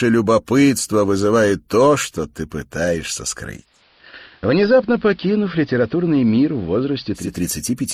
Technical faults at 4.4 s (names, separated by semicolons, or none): digital radio blending to analogue